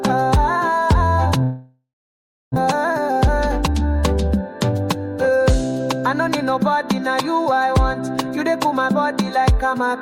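From 1.43 to 2.58 s a long network dropout likely cut off the incoming stream, and about a second of audio never plays. The receiver stretches the last sound into a fading buzz, then leaves roughly 0.67 s of near-silence before the sound resumes further on.

From 2.65 to 3.75 s a jitter buffer speed-up drains the backlog by repeatedly cutting short pitch-period slices, removing about a tenth of a second in total. The sound runs at 107% speed with unchanged pitch and comes across slightly hurried.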